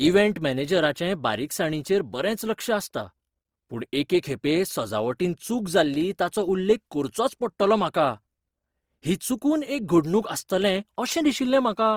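Throughout the speech the tone has a plainly audible rough, grainy, noisy texture, with the top end still reaching about 20.2 kHz. This is likely Opus compression in its CELT mode at a low bitrate, consistent with around 24 kbps, filling starved bands with folded or noise-like energy.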